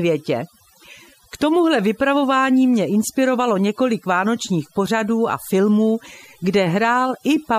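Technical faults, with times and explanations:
Throughout, overdone noise removal: aggressive noise reduction pulls bands near the noise floor down to nothing, leaving a lowered background with twinkling specks.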